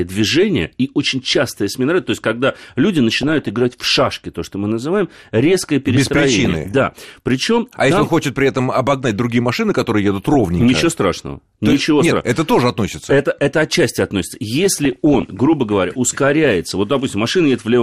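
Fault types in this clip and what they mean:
MP2 compression: The speech has likely been coded as MPEG Layer II at around 80 kbps. That is too few bits for the 32 sub-bands, so upper bands drop out and those left are coarsely quantised. The result is plainly dull, granular speech with a gurgle throughout.
DAB burbling: Bit errors slipped past error correction into the MP2 data, corrupting samples so single sub-bands get short blips of noise. This gives burbling at 3.21–3.49 s after "то есть когда люди", 6.45–6.73 s, 10.34–10.76 s after "другие машины которые едут", and 14.63–15.31 s after "это отчасти относится".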